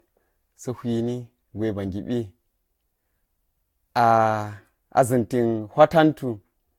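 Across the whole speech clip there's generation loss: swirly, hollow smearing with blurred attacks and nothing above 18 kHz, likely from about four Vorbis re-encodes around 70 kbit/s.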